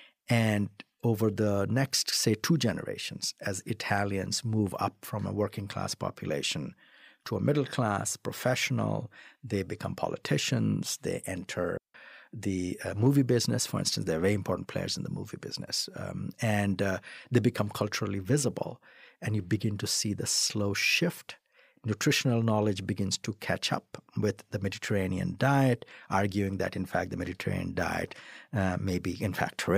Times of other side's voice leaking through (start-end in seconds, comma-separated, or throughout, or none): none